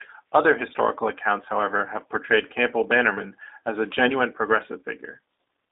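Speech sounds narrow, rough and faintly synthetic throughout, confined to 300 Hz–3.7 kHz: plainly audible G.729 codec damage, consistent with an 8 kbit/s VoIP link.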